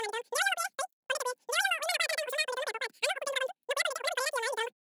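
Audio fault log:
Throughout, wrong sample rate: speech runs three times too fast and about 19 semitones high, which fits 16 kHz audio played back at 48 kHz without conversion.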